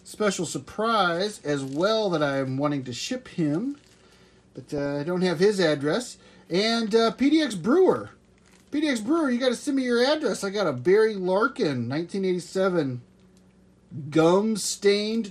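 The whole clip sounds dull, with a gurgling, granular edge, plainly audible. That is likely MP2 compression, upper sub-bands starved of bits, which fits about 80 kbps. From 4.78 to 4.86 s, DAB burbling breaks out, a brief spatter of noise blips in single sub-bands. Bit errors got past the error correction into the audio data, pointing to four damaged frames from a small error rate.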